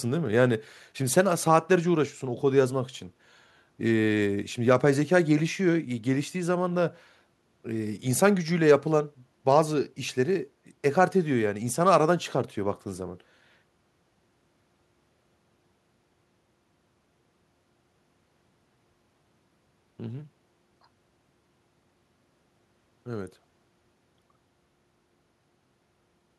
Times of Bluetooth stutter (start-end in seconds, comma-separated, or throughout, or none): none